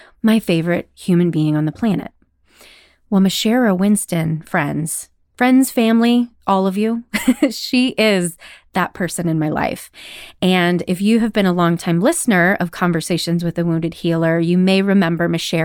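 No technical faults can be heard anywhere in this recording.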